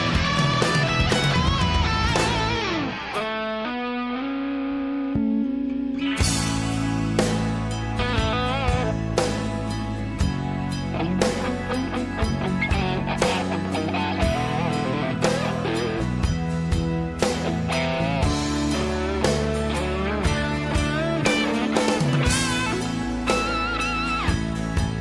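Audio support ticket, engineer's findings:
Engineer's findings: no audio faults found for this support ticket.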